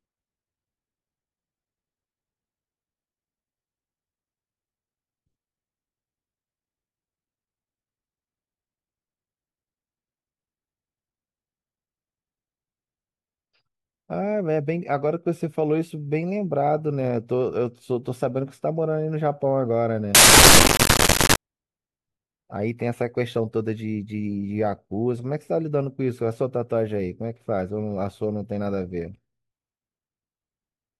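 From 20.15 to 21.36 s, samples built from the wrong bytes turn the speech into loud, harsh broadband noise.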